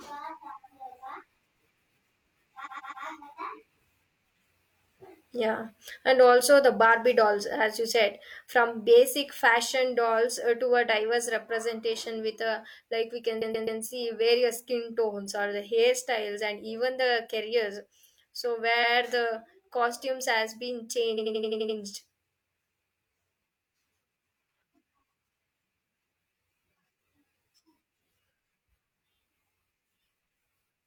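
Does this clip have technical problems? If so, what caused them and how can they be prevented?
Yes. The speech stutters four times: at 2.62–3.01 s and 13.38–13.76 s (after "with a like we") a 128 ms stretch replays three extra times. At 18.80–18.92 s, before "the costumes has been", it replays once. After that phrase, at 21.14–21.74 s, an 85 ms stretch loops seven times. These are repeated frames: blocks of compressed audio were written or sent again, so the decoder played them again, lengthening the clip. Prevent it by checking frame sequence numbers so duplicate frames are dropped rather than decoded.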